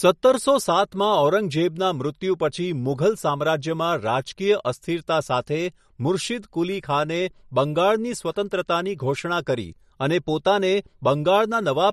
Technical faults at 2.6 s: MP3 compression

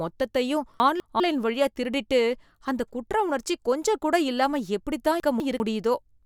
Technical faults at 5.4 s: chunks out of order

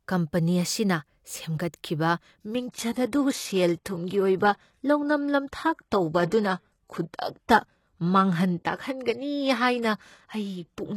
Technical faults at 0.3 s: none

